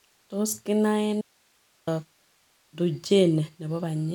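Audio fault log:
1.21–1.87 s, audio dropout to a faint residue: the speech cuts out abruptly for about 0.66 s, and what's left in the hole is just a thin bed of hiss sitting roughly 40 dB below the normal level, then the signal snaps straight back. It doesn't trail off like a natural pause or fade. That hiss is the giveaway: the wanted signal was likely lost upstream while everything after the break stayed live and kept passing its own noise.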